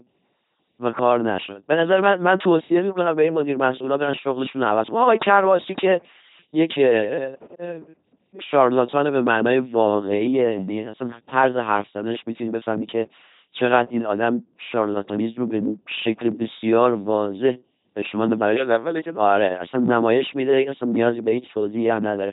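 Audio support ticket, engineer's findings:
LPC-10 vocoder artefacts, whole clip. Speech buzzy and mechanical, robot-like, heavily degraded; nothing above 3.9 kHz. Probable component: low-rate vocoder in the transmit path, sound consistent with a 2.4 kbit/s LPC-10 stream. Mechanism: each frame resynthesised as either a pulse train or noise through a ten-pole vocal tract filter. The original voice's excitation is discarded.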